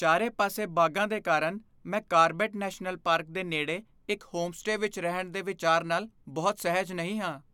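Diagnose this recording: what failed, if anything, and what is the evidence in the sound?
Nothing failed: the sound carries no evidence of a fault at any stage of the chain.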